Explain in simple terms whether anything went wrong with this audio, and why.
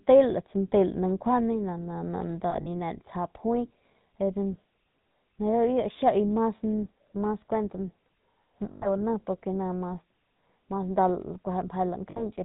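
The whole recording has passed through the GSM full-rate codec, the system used by early mobile phones. It rebuilds speech from a simple model of the throat and mouth, driven by regular pulses. Nothing above 4 kHz survives. That is why the speech sounds muffled, buzzy and gravelly from start to finish. The damage is easy to hear.

There are three spots with lost GSM frames. When a piece of the signal goes missing, the decoder repeats the last good piece and lets it fade. You hear a brief rough, metallic ring instead of speech. The first is from 2.50 to 2.67 s, where about 80 ms of sound is missing in short gaps, the longest around 40 ms. The second runs from 8.72 to 8.87 s, about 100 ms. The third runs from 12.10 to 12.32 s, about 60 ms.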